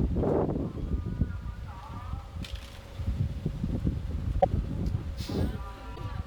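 At 4.40 s the sound skips forward and a brief glitch fills about 45 ms up to 4.45 s, and the same thing happens again from 5.94 to 5.99 s. That's most likely a broken MP3 bit reservoir: frames went missing, so the next frames reached back for borrowed bits and decoded someone else's bytes instead. Each glitch spans not quite two frames, which fits MP3's roughly 26 ms frame length.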